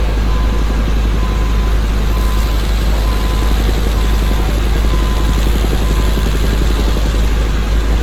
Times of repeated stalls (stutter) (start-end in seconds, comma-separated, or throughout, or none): none